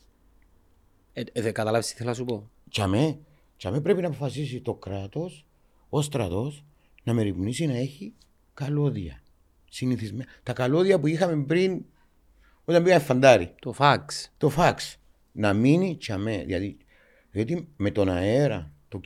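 Speech recording; no technical faults audible anywhere in the clip.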